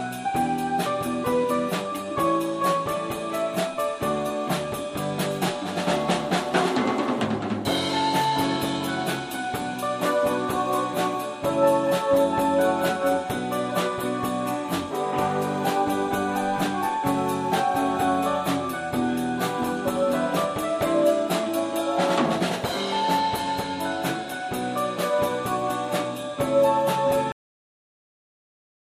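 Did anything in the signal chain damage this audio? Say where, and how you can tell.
Yes, there's a cut-off end at 27.32 s. The sound stops mid-event and drops straight to digital silence with no decay through the end. That points to the storage or playback stage: the final buffers never got written out before the stream closed.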